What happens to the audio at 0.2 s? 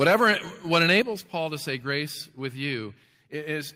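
Peaks crackle harshly from 0.01 to 0.3 s, likely microphone overload: input about 3 dB too hot clips a small fraction of samples flat.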